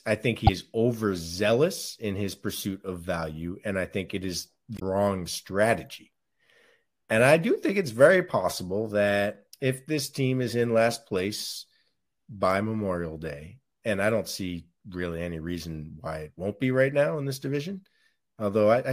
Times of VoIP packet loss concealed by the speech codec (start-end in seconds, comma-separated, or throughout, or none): none